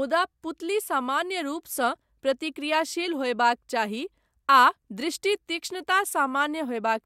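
Nothing in this speech recording points to a technical fault anywhere in its signal path.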